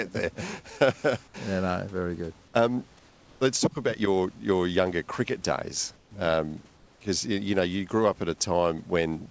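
Speech heard through a call carries comfort noise in place of the background at 2.99–3.41 s, 5.96–6.11 s and 6.77–7.01 s: the room tone becomes a steady, featureless hiss about 3–4 dB quieter, likely from discontinuous transmission, rather than dropping to silence as a gate would. At 3.60–3.66 s the other side's voice leaks through, a brief second voice only about 5 dB under the talker, likely residual loudspeaker echo the canceller missed. Right after, from 3.68 to 3.98 s, the talker's speech is suppressed in double talk: roughly 150 ms of it dips by up to about 20 dB, likely because the echo canceller ducked both voices while the far side spoke.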